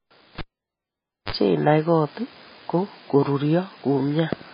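Speech throughout sounds watery and swirly with nothing above 5 kHz, likely heavy MP3 compression at a bitrate near 16 kbps; unlike simple low-pass filtering, weak detail flickers between frames. From 0.38 to 1.32 s comes a cable pulled and plugged in: a pop, about 0.89 s of near silence, a 39 ms burst of 50 Hz mains buzz, then a second pop. That buzz and pop pair sets it apart from an ordinary dropout.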